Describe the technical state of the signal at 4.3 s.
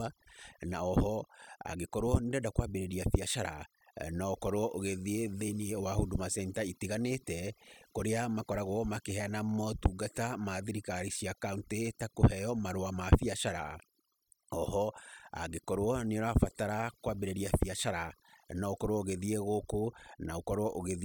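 At 4.3 s the speech is under overdone noise removal, which runs through the whole clip rather than appearing as a local event. The noise reducer pulls individual frequency bands down hard whenever they sit close to its noise estimate, so the background drops and breaks up into twinkling specks, and the quieter parts of the voice vanish with it. Unlike a low-pass filter, it removes energy band by band and keeps shifting instead of cutting cleanly above one frequency.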